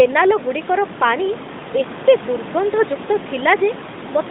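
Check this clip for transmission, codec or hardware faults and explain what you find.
Nothing here points to a transmission, codec or hardware fault: the speech comes across steadily, with only the room's own background noise sitting about 12 dB beneath it.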